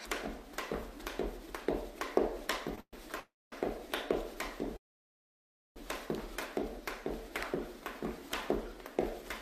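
Around 2.75 to 2.78 s there's a short stall from a late packet: the last sound gets held about 19 ms, then carries on with nothing lost.

Then come three call audio freezes, at 2.80 to 2.94 s, 3.20 to 3.53 s and 4.77 to 5.77 s. Each is a held sound fading into silence, the last one almost a second, likely from packets delayed in transit.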